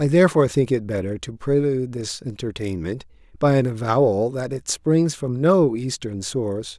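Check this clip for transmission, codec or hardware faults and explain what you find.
Nothing in the transmission path, the encoding or the playback hardware shows up as a fault in this speech recording.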